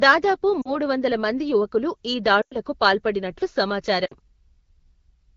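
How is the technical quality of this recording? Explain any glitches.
The speech, carried over AMR wideband (HD Voice) at 12.65 kbit/s, has three short dropouts where it briefly smears and fades. They come from lost AMR speech frames at 0.61 s (40 ms), 2.41 to 2.56 s (100 ms) and 4.05 to 4.14 s (60 ms). The decoder repeated the last good pitch and vocal-tract settings at falling gain, which fits two, five and three lost frames.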